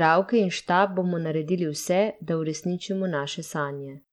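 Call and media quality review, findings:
Treble dropping out and flickering, gritty grain with aliasing on the speech, entire clip. Likely Bluetooth SBC compression: top sub-bands starved of bits, fits a low bit pool near 96 kbps. Unlike a clean low-pass, highs flicker rather than stopping evenly.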